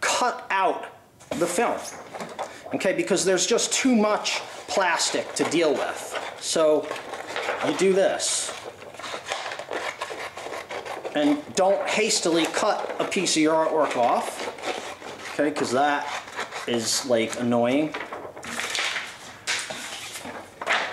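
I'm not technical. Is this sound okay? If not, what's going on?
Yes, this sound is fine from a technical point of view, and nothing in the recording itself is going wrong at any point.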